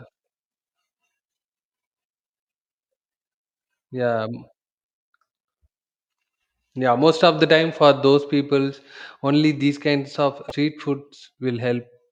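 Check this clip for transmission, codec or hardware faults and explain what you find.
One fault stands out, a burst of damaged data in a compressed stream from 10.48 to 10.52 s. Corrupted bytes there left the decoder misreading frames and losing sync until it found the next valid header, producing a brief glitch.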